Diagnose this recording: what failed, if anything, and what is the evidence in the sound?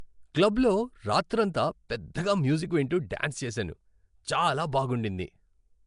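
The codec stage failed. Throughout the speech there is a rough, hissy halo around every syllable and a smeared, underwater quality, and nothing sits above about 10.6 kHz. This is likely Nellymoser compression. It codes short blocks with very few bits, leaves weak bands empty and refills them with noise. On a spectrogram this shows as a hard ceiling near 10.6 kHz, with blotchy, noisy patches between the harmonics instead of clean partials.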